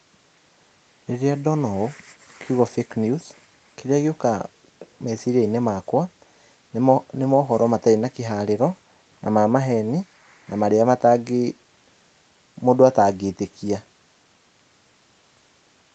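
Nothing stood out on listening; the speech carries the expected call-path sound, with no content above about 8 kHz.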